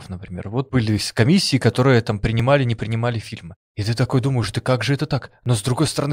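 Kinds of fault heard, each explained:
Periodic USB or driver dropouts: a background task stalls the audio path about every 1.02 s, and each time a couple of milliseconds of the speech are skipped, not silenced. From 2.4 to 5.46 s this gives a few evenly spaced ticks, unlike random glitches, whose spacing would wander.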